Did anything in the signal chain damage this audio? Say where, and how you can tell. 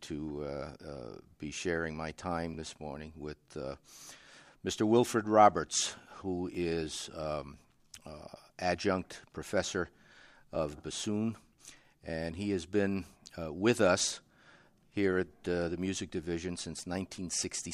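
Yes: overlapping chunks in the buffer stage. Stutters at 2.54 s (after "be sharing my time"), 6.55 s and 10.55 s, every 4 s, each replaying about 7 ms rather than dropping audio.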